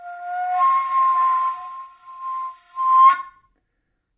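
No technical faults are audible.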